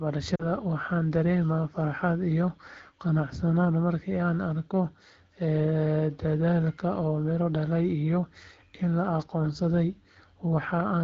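From 0.35 to 0.48 s, lost AMR speech frames leave a brief smeared, fading dip. About 40 ms was repeated from the last good settings with falling gain. On the waveform, the amplitude shrinks. On a spectrogram, the harmonics blur and thin.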